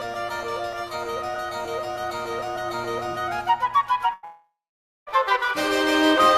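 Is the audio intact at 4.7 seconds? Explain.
No, 4.7 seconds falls inside a long network dropout running from about 4.25 to 5.09 s. The likely cause is that the stream simply stopped arriving for around 0.82 s, so the receiver papered over the gap by stretching the last sound into a buzzy, fading tail. That fill doesn't last: about 0.53 s of the gap is plain silence. When the audio resumes near 5.09 s, the missing stretch is gone for good.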